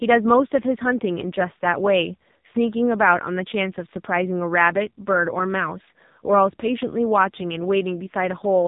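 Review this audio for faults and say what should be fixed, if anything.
The speech was carried through the AMR narrowband mobile codec for the whole clip, at a low mode that fits roughly 6 kbps. At 8 kHz sampling, with each 20 ms frame rebuilt from a vocal-tract model and a handful of pulses, everything above about 3.8 kHz is gone, leaving the voice thin and boxed-in. With so few bits, the damage is heavy: a buzzy, synthetic texture. To prevent it, capture or route the call over a wideband or higher-rate codec, or record the source locally.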